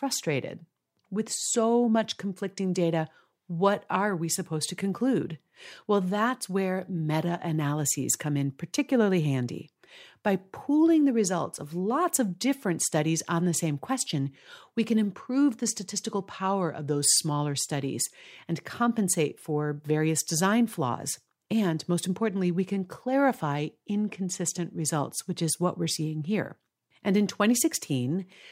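No technical faults can be heard anywhere in the speech recording, so there is nothing to place on a timeline.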